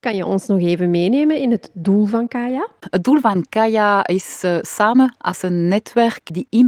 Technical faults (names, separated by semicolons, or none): lost packet rebuilt from error correction